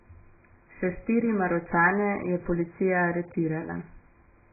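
The speech was most likely squeezed through AAC compression at a very low bitrate, around 12 kbps, for the whole clip. The encoder discarded everything above 2.5 kHz and coarsely quantised what remained, so the audio sounds dull, muffled and heavily smeared, with a warbling, fizzy texture.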